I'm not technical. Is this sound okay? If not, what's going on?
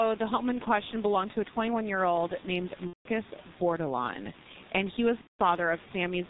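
No. The G.723.1 codec, an old, heavily compressed phone format, removes everything above 4 kHz throughout, so the speech sounds muffled and hoarse with smeared consonants.

At 2.87 to 3.08 s and 5.21 to 5.39 s, VoIP packet loss concealed by the speech codec: the player guessed the missing sound, producing a buzzy or noisy blur that fades.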